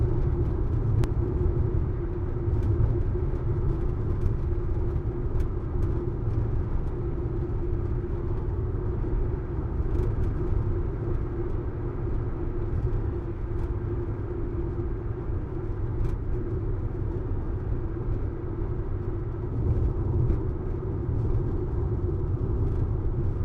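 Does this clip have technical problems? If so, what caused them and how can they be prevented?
Yes. At 1.04 s there is damaged data in a compressed stream: part of the encoded file was lost or overwritten. The decoder could not read the frame at that point, lost its place, and skipped ahead to the next valid frame header. The result is a brief glitch lasting only a few milliseconds. Storing and transferring the file with checksums, or over an error-corrected link, and re-downloading any copy that fails verification would prevent this.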